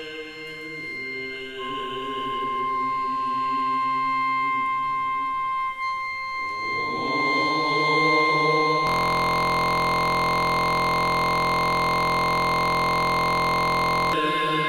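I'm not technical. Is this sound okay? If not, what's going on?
No. A system hang loop runs from 8.87 s to 14.13 s. The computer stalled while the sound hardware kept replaying one tiny 23 ms slice, over two hundred times. That becomes a steady buzz repeating about 43 times a second, which fits a 1024-sample buffer.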